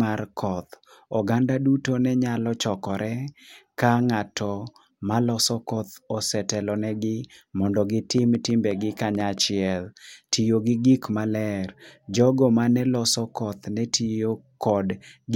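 Speech carries a train of clicks from 8.18 to 9.39 s: about seven near-identical pulses at roughly 5 per second, unevenly spaced and peaking around 5 dB above the speech, so they tick through pauses as well as over syllables. Their matching shape and short, bounded burst set them apart from vinyl-style crackle, which is denser and more random. The likely cause is interference from nearby equipment or a faulty connection or power supply.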